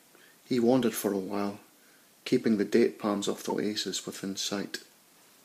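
At 3.49 to 3.52 s the speech briefly jumps ahead, likely a broken MP3 bit reservoir, where a frame after a cut drew on the wrong bytes.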